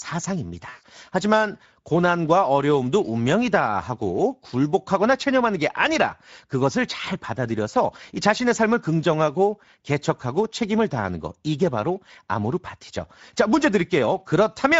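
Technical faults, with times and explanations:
Throughout: Speex codec, plainly audible at about 16.8 kbps; starved CELP excitation leaves the speech noisy and hoarse, with a noise-like fill above 4 kHz.
0.69 to 0.83 s: VoIP packet loss concealed by the speech codec; about 140 ms went missing, so the decoder stretched its last pitch and filter into a fading buzzy tone or coloured noise.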